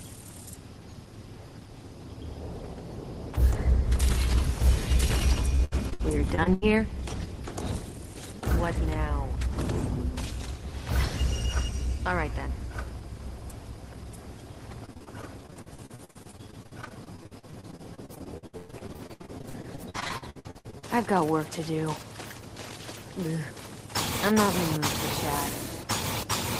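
From 5.55 to 6.64 s, and again from 14.86 to 20.84 s, repeated packet loss (robotic sound) breaks the audio into choppy pieces. Each missing stretch, up to 117 ms, is covered by extending the preceding sound, leaving about 28 and 32 percent of the two spans concealed.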